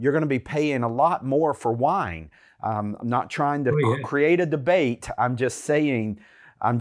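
No technical faults are audible.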